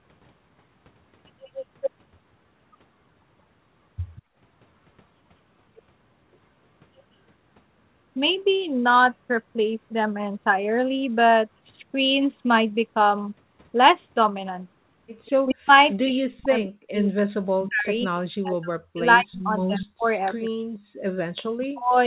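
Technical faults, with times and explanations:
4.15–4.22 s, 15.26–15.95 s, 17.61–17.69 s, 19.64–19.82 s, echo leak: a faint delayed copy of the talker returns 189 ms late. It is about 25 to 30 dB below the speech early on and only about 15 dB down at 17.6 and 19.6 s, likely from an echo canceller on a loudspeaker endpoint letting residual pickup through.
4.22–4.37 s and 20.98–21.02 s, background gated by the echo canceller: the room floor briefly ducks while far-end audio plays. It drops about 14 dB for roughly 150 ms, then about 33 dB for 40 ms, and recovers once the canceller releases its suppression.
15.44–20.7 s and 21.6–21.97 s, speech suppressed in double talk: with both sides active, the talker's level collapses in pieces by around 40 dB, for several seconds in the first span. This is likely because the canceller could not tell near-end speech from echo and attenuated both.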